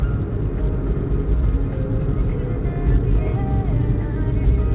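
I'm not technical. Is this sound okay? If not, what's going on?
Yes, nothing is wrong here: the sound has simply come through a normal phone-call connection, which carries nothing above about 4 kHz and so gives it the narrower, phone-like quality you'd expect from a call.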